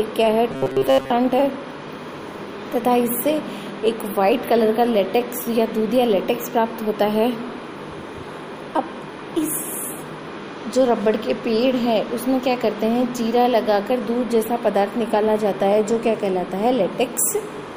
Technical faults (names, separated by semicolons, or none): robotic sound from repeated short buffers